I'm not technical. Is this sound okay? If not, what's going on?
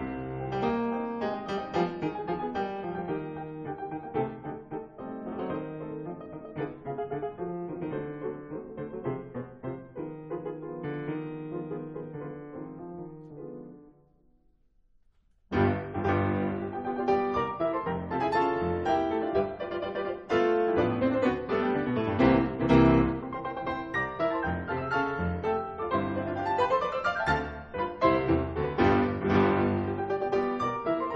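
Yes, nothing stood out as a problem on listening to this sound.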